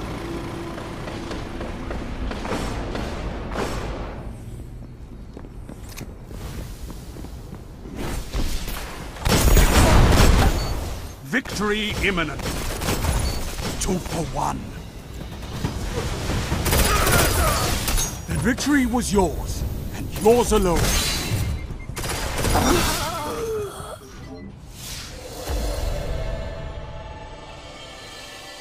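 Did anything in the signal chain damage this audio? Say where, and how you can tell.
No, nothing in the signal chain damaged this audio.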